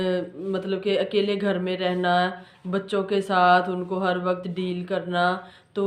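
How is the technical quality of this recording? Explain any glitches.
Nothing here needs explaining: the recording runs without a single glitch, dropout or other technical hiccup to point to.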